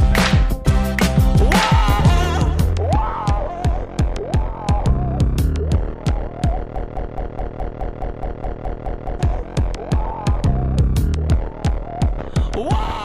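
There's one clear fault in this audio, a broken-record loop from about 6.76 s to 9.20 s. A slice of roughly 210 ms repeats back to back, exact copies, twelve times over, so for nearly two and a half seconds you just hear the same fragment stuttering. Whatever should have played there is gone. The likely cause is a stalled player, encoder or stream that kept pushing out the last chunk it had buffered until it recovered.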